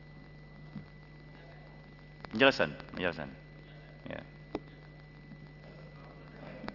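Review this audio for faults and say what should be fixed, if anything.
Across the whole clip, high-frequency content sounds gritty and metallic, with harsh tones that don't belong to the sound and a spectrum that runs hard up to an edge at 6 kHz. This is aliasing: the rate was cut, which points to a drop from 48 kHz to 12 kHz, without first removing what lay above 6 kHz, so that energy folded back down as false pitches sitting roughly 20 dB below the signal. To prevent it, apply a steep low-pass filter below the new half-rate before downsampling, or use a proper resampler that does this.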